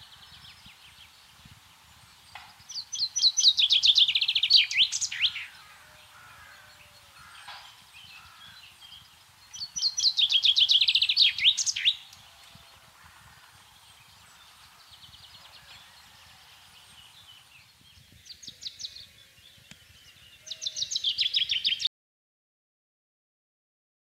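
At 21.87 s the sound just stops dead and stays in silence right to the end, about 2.3 s of it. That's an audio dropout to silence, likely the input getting cut off while the recorder kept writing silence, so even the room tone vanishes.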